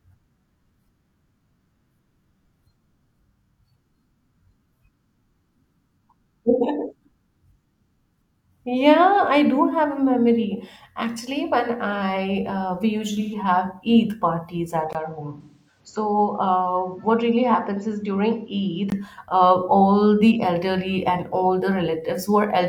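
At 13.19 s, AAC frame loss with concealment turns about 0.15 s into a smeared, phasey, noisy patch, which fits roughly 128 ms of missing audio rebuilt from the last good spectrum. On a spectrogram it shows as a blurred smudge in place of clear harmonics. Right after "parties at", at 14.93 s, a 20 ms gap appears. The sound then turns duller and boxier, drops by about 5 dB, and gains a noise floor about 35 dB below the signal. Nothing above 7.6 kHz remains until 18.92 s, so the spectrogram shows a flat ceiling. This is likely the input switching to a poorer device. Within that stretch, at 15.41 s, a second frame loss smears about 0.4 s, fitting roughly 256 ms concealed. Its waveform envelope sags and then recovers.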